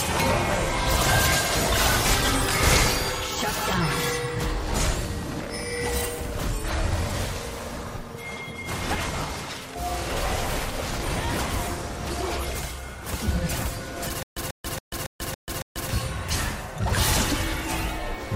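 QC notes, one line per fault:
2.26–2.28 s and 11.64–11.67 s, lost LE Audio frames: gaps fitting two and three 10 ms frames are concealed with sign-scrambled repeated spectra, giving brief noisy smears that show as blurred spectrogram patches.
14.23–15.90 s, stutter with silent gaps: a 140 ms burst repeats six times, every 278 ms, with 138 ms of flat-line silence between, likely a stalled stream replaying its last fragment.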